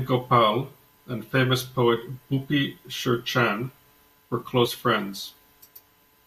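At about 4.65 to 4.68 s the speech suddenly lurches forward. That's compressed frames skipped: a couple of frames never reached the output, either because they were missing or because the decoder rejected them as corrupt. Roughly 40 ms of audio just vanishes, which fits two 20 ms frames. The sound jumps ahead at that point.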